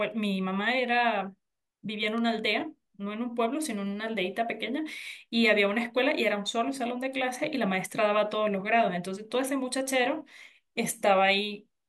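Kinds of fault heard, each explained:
Electrical switching spike: a sharp snap or tight cluster of clicks at 2.18 s, lasting only a few milliseconds and sitting on top of the speech rather than replacing it. It is fairly quiet, peaking around -30 dBFS, and most likely came from a nearby switch, motor or static discharge arcing briefly and coupling into the audio line. On a waveform it is a narrow isolated spike; on a spectrogram, a thin vertical line spanning nearly all frequencies.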